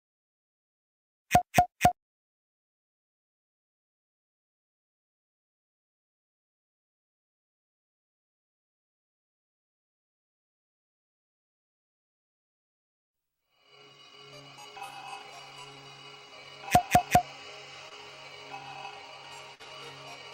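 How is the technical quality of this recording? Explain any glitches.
Two brief glitches appear near the end. At 17.89 to 17.93 s and again at 19.55 to 19.61 s the sound smears and wobbles for an instant. Both are short concealed packet loss: about 20 ms, then 40 ms, of audio arrived too late, so the receiver extended the preceding sound to cover each gap and then blended back into the real signal.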